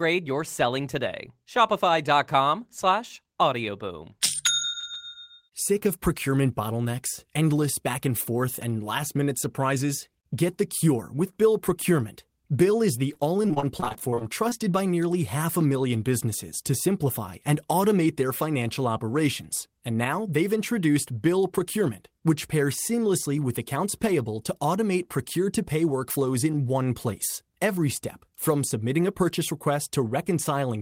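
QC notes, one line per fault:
13.13–14.53 s, repeated packet loss (robotic sound): across this 1.4-second stretch the audio breaks into well over a dozen short dropouts, none longer than 27 ms, which points to packets repeatedly lost or arriving too late. Each hole is papered over by stretching the preceding sound, about 311 ms of fill in total, roughly 22% of the span, while about 280 ms of real signal never arrives. The rapid patch-and-gap cycle gives the choppy texture with pieces missing.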